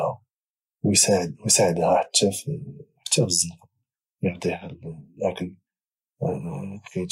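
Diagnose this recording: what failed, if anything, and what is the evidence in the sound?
No audible fault anywhere.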